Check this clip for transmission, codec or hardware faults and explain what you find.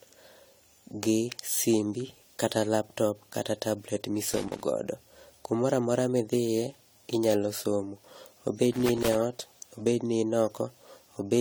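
Two kinds of fault are audible in this speech: a lossy-codec smear that lasts the whole clip, and two bursts of loose connector crackle.

Throughout, the speech sounds swirly, hollow and smeared, with softened consonant attacks. The likely cause is generation loss, meaning the audio was re-encoded around five times. The character fits AAC-LC at about 64 kbit/s, but it sounds worse than one pass at that rate would. Each pass quantises on a shifted frame grid, so noise and spectral holes pile up. A single low-bitrate encode would band-limit the sound. This one still reaches 20 kHz.

The loose connector crackle runs from 4.28 to 4.63 s, right after "kata laptop kata tablet", and again from 8.72 to 9.15 s, just before "eot obed ni in". A worn contact makes and breaks rapidly, which chops the signal, and any DC on the line adds pops. It is heard as irregular scratchy crackle. Steady dropouts or clicks on a regular grid come from buffer or clocking faults. 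These bursts are erratic and last only a fraction of a second.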